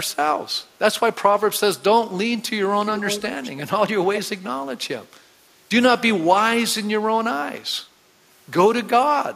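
A far-end echo canceller likely failed to remove loudspeaker pickup, so echo leak adds a copy of the speech 348 ms late, roughly 10, 20 and 10 dB below the speech, at 2.9–3.24, 3.42–3.7 and 4.15–4.21 s.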